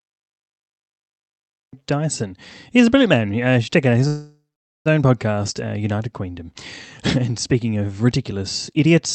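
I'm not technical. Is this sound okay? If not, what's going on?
No. There's a cut-off start: it's silent until 1.73 s, then the speech jumps in mid-sound, as if the recording began a moment late.

There's also a call audio freeze from 4.07 to 4.88 s. The last sound smears into a fading buzz, then goes quiet for almost half a second. The speech picks up where it left off, just delayed, most likely because the connection briefly stalled.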